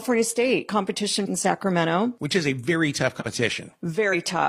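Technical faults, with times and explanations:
3.16 to 3.22 s and 4.09 to 4.15 s, compressed frames skipped: Just after "is a very tough", the speech jumps forward, losing about a tenth of a second. Near the end, a second jump drops roughly half that. Whole blocks of the compressed stream were never decoded, so playback resumes further along. The leaps come in frame-sized steps.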